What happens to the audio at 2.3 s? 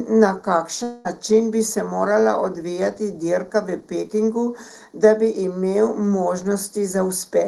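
At 2.3 s the speech carries channel delay (comb filtering), as it does for the whole clip. One channel lags by about a fifth of a millisecond. Summed to mono, they cancel at evenly spaced frequencies, the first near 3 kHz. The speech sounds hollow and phasey.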